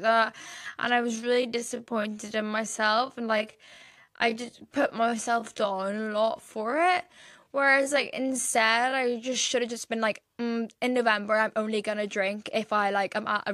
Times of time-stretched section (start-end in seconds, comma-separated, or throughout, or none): 0.00-9.46